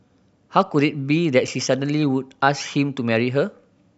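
A short speech clip with one block of digital silence at about 1.47 s. The audio drops straight to silence for roughly 5 ms and comes straight back, with no fade either side, so the gap is heard as a tick or dip. That gap of 256 samples fits an output buffer that wasn't filled in time, so the output went out as zeros for that span.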